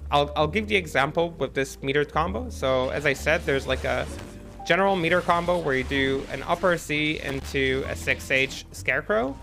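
Around 4.18 to 4.30 s, and again from 7.28 to 7.52 s, there's loose connector crackle: a worn contact briefly chopping the signal into irregular scratchy bursts.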